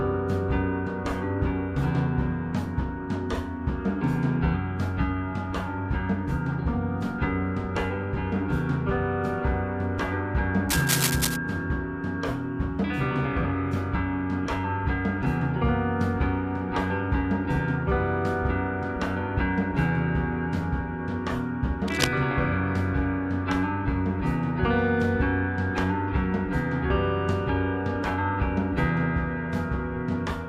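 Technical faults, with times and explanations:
10.69–11.37 s and 21.88–22.08 s: cable scratch noise, rustling bursts roughly as loud as the sound, likely a worn contact moving; ragged broadband smears on the spectrogram.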